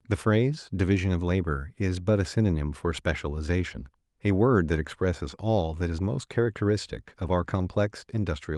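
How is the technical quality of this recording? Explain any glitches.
Nothing to flag: the speech recording carries no audible technical faults at any point.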